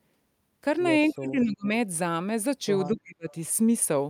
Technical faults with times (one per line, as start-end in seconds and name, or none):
1.11-1.44 echo leak
1.11-1.72 speech suppressed in double talk
2.87-3.28 speech suppressed in double talk